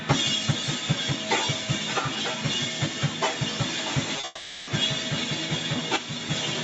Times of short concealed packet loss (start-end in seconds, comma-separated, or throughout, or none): 4.16-4.24